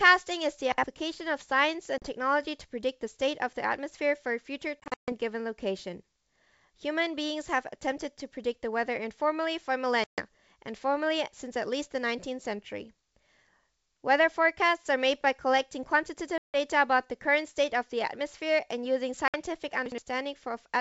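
At 0.72 to 0.84 s, and again at 19.86 to 19.98 s, chunks play out of order: a 60 ms chunk lands one slot late. Unlike a dropout, nothing goes missing, but the sound jumbles briefly at three hard joins.

Packet loss on an ADPCM call cuts hard-edged silent holes into the wideband G.722 speech at 1.98 to 2.06 s (40 ms), 4.80 to 5.13 s (220 ms lost in scattered runs, longest 140 ms), 10.04 to 10.22 s (140 ms), 16.38 to 16.56 s (160 ms) and 19.28 to 19.36 s (60 ms). What sets these apart from plain gaps is the aftermath. The decoder's predictor and step size have drifted from the sender's, so speech resumes slightly distorted before settling.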